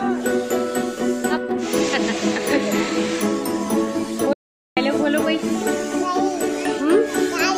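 An audio dropout to silence runs from 4.33 to 4.77 s: about 0.44 s of flat silence, a blank spectrogram column, likely from input lost mid-recording.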